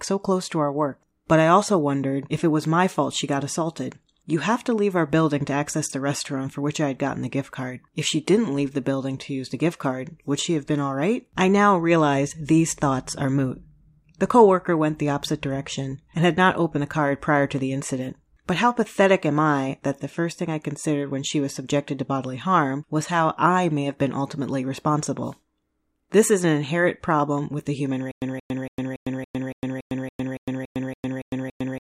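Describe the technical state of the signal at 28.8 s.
At 28.8 s you're right inside a stutter with silent gaps, which starts at 28.11 s and runs to the end of the clip. The same 176 ms scrap of speech keeps coming back, with about 106 ms of dead digital silence after each, so it pulses every 282 ms, 13 times in all. That's likely a stalled stream replaying its last fragment on each retry, and whatever speech should have played here is gone.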